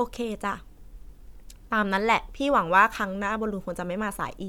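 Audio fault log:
No faults heard anywhere in the speech recording.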